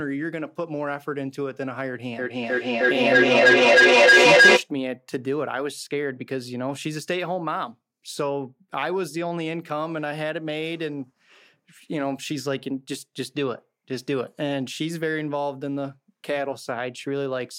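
From 2.19 to 4.7 s the speech runs into feedback echo between two devices: a second device in the room replays the call and that microphone recaptures it. Repeats arrive roughly every 300 ms and build to about 14 dB above the speech.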